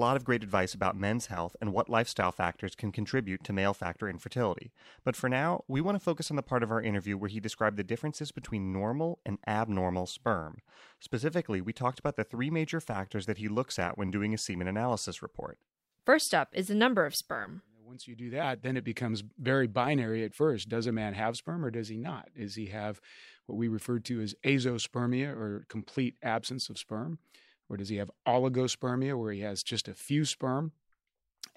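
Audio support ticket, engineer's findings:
No audible faults found.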